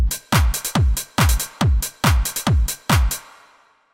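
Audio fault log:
No fault is logged for this clip of sound.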